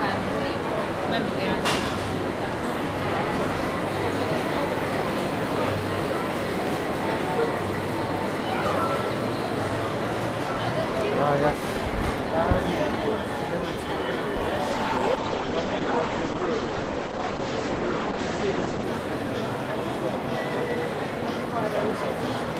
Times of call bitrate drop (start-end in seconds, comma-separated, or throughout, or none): 14.72-18.91